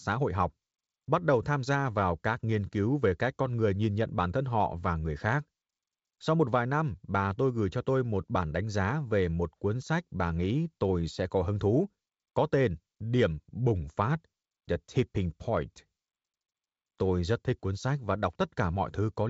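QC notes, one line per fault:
No faults found in this speech recording.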